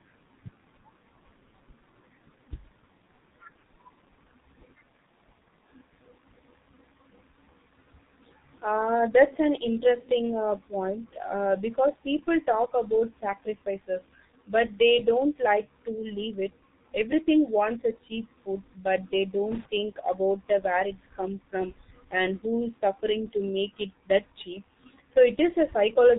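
The speech passes through a G.723.1 codec for its whole length. This low-rate telephony coder works in long frames and refreshes its voice model slowly, consistent with roughly 6.3 kbit/s. Everything above 3.8 kHz is gone, so voices sound muffled and hoarse, with heavily smeared consonants.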